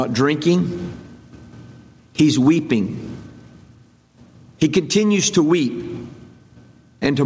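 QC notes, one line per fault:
Throughout: gain pumping. The gain swings about 20 dB, pulling down under loud sounds, likely from excessive gain with a fast limiter.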